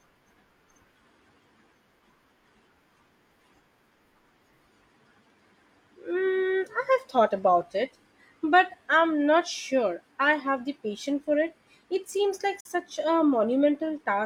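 A digital broadcast dropout occurs from 12.6 to 12.69 s, just after "seems like". The receiver muted on a bad frame, so the speech fades out over about 8 ms into a brief silent hole. Roughly 43 ms of programme is lost, which fits a single dropped frame.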